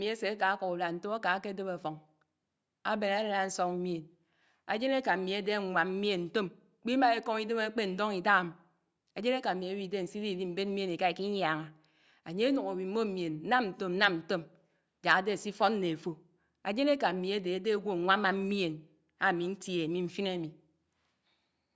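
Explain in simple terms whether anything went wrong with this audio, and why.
Nothing went wrong with this audio; there are no faults to point to anywhere in it.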